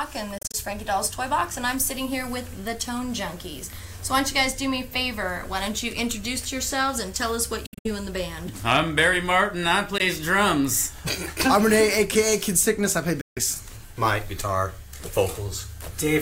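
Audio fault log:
0.38–0.57 s, 7.66–7.89 s, 9.98–10.02 s, 13.21–13.41 s: Bluetooth dropout. The sound cuts to silence with abrupt edges, as brief gaps clustered in bursts of up to 0.2 s, then resumes further on as if it had kept playing. The likely cause is audio packets arriving too late and being discarded.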